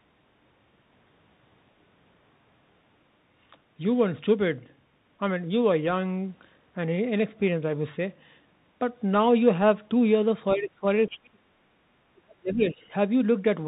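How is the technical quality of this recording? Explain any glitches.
The recording has clear technical problems: narrowband Bluetooth headset coding throughout, and a cluster of dropouts and leakage near the end.

The speech passes through a Bluetooth CVSD headset codec, which fits a 64 kbps CVSD link. This codec sends one bit per sample, saying only whether the signal rises or falls, and adapts its step size as it goes. Nothing above 4 kHz survives, so the speech sounds muffled and telephone-like. Loud, bright sounds outrun the step size and distort, s sounds turn scratchy, and a grainy hiss sits underneath. The damage is plainly audible.

The speech is suppressed in double talk at 10.56 to 10.85 s, 11.08 to 11.75 s and 12.09 to 12.81 s. This is likely an echo canceller that could not tell the talker apart from the other side's voice on the loudspeaker and turned everything down. The first dip is shallow, about 20 dB for roughly 0.3 s. 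The later two go much deeper, around 40 dB for about 0.7 s each, and the speech nearly vanishes in those stretches.

The other side's voice leaks through between 10.99 and 11.18 s. It is likely loudspeaker sound that the echo canceller failed to remove from the microphone. A brief second voice can be heard at about 15 dB below the main speech, overlapping the start of the deep dropout at 11.08 s.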